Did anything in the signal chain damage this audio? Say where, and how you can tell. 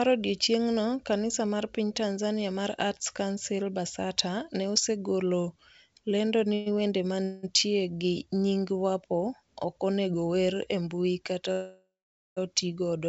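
Yes, call audio freeze at the network and jitter-buffer stage, at 6.54 to 6.68 s, 7.24 to 7.45 s and 11.52 to 12.39 s, the last decaying into about 0.49 s of silence. On a spectrogram each shows a smeared, fading horizontal band. Likely cause: delayed packets starving the buffer, so speech resumes intact but late.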